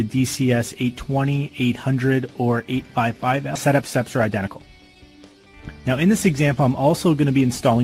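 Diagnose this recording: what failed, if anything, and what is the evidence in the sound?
At 3.55 s the playback jumps forward with no gap, a skip ahead at the network jitter buffer. Roughly 0.7 s of queued audio was discarded to cut delay. On the waveform the two sides butt directly together with no silence, and the spectrogram shows an abrupt content change at that line.

From 3.67 to 5.62 s a jitter buffer speed-up runs the sound at 113% with unchanged pitch, trimming about a third of a second in pitch-period-sized pieces. The waveform shows events packed closer together. Spectrogram harmonics hold their frequency while features arrive sooner.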